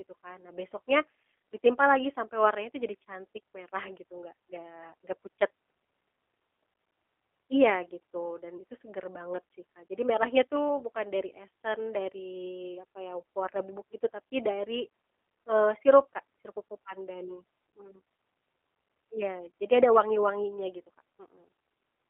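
Speech passes through a G.729 codec throughout, with a rough, buzzy, synthetic edge that fits an 8 kbit/s G.729A coder rebuilding each 10 ms frame from a filter, pitch predictor and sparse pulses. On a spectrogram, energy is confined to roughly 300 Hz–3.5 kHz, with smeared harmonics.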